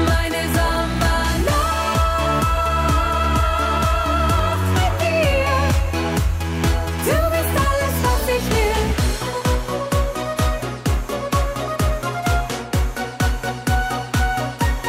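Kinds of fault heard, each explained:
Clock drift buffer slips: about seven clicks recur every 1.82 s, likely two clocks drifting apart; their strict regularity distinguishes them from random dropouts.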